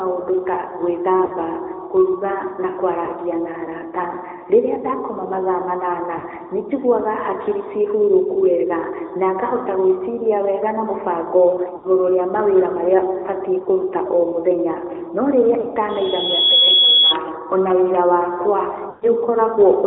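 Speech heard through the AMR narrowband mobile codec throughout, confined to roughly 300 Hz to 3.7 kHz with plainly buzzy, synthetic coloration, which points to a mid-rate mode near 10.2 kbps rather than simple band-limiting, which would not add that texture. Lost AMR speech frames cause brief smeared dropouts at 1.26 s (40 ms), 3.06 to 3.09 s (20 ms), 6.18 s (40 ms), 11.76 to 11.87 s (80 ms), 13.64 s (20 ms), 15.60 s (40 ms) and 18.90 to 19.08 s (120 ms). Unlike clean digital gaps, the decoder stretches the last sound and fades it rather than cutting to silence. A loudspeaker feedback squeal from 15.89 to 17.15 s is a single 3.4 kHz tone that swells over roughly 0.7 s to about 5 dB above the speech. That self-building rise separates it from a steady interfering tone.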